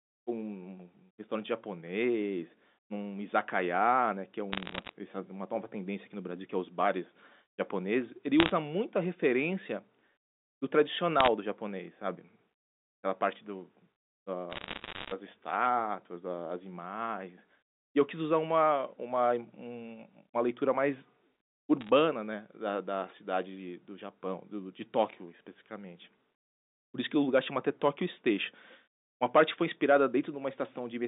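Bit errors on a digital phone line hit at 4.52 to 4.92 s, 8.40 to 8.52 s, 11.20 to 11.28 s, 14.50 to 15.12 s and 21.81 to 21.90 s. Flipped bits corrupt single samples, giving sharp ticks and crackle over the speech, heaviest around 8.4 s and 14.5 s. The G.711 telephone band of 200 Hz to 3.7 kHz can be heard under all of it.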